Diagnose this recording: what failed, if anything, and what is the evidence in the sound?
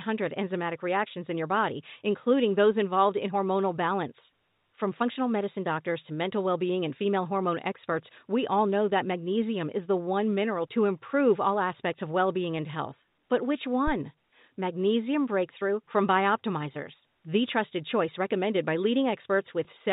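Phantom power thump at the analogue input: a supply step crossed the coupling capacitors, leaving a deep thud from 13.87 to 13.94 s that dies away within 15 ms.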